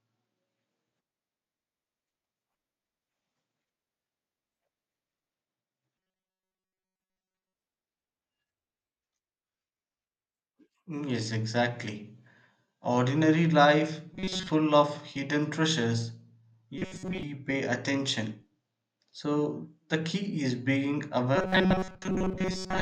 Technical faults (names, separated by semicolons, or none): robotic sound from repeated short buffers